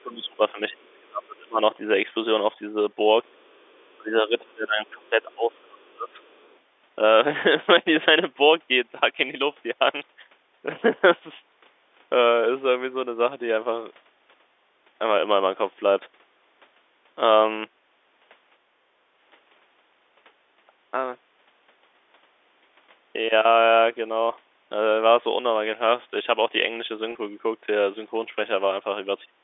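From the start to 1.61 s the speech is pulled down hard, by roughly 30 dB at its deepest, across about one and a half seconds. This is speech suppressed in double talk. Both ends were likely talking at once. The echo canceller could not tell the near talker from its own loudspeaker echo, so it turned everything down. Inside that stretch, at 0.93 to 1.01 s, a faint scrap of the other side's voice leaking through appears, about 40 dB below the speech. It is likely the far talker's sound picked up from the loudspeaker and not fully cancelled.

At 3.27 to 3.35 s the speech dips again, by about 15 dB, for a brief moment. Right after, from 3.34 to 3.92 s, the far voice leaks through more clearly, at about 35 dB under the speech.

From 3.93 to 6.2 s the suppression returns for about two seconds, with drops near 30 dB. Small leaks of the other side show at 5.83 to 5.92 s, about 40 dB down, and from 6.21 to 6.58 s, about 35 dB down.

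At 27.12 s a single 30 ms packet goes missing. This is packet loss with pitch repetition. The receiver repeats the last pitch cycle to fill the gap. It is heard as a short, slightly buzzy hold on the sound.

From 29.25 s to the end the speech is suppressed once more, by about 35 dB.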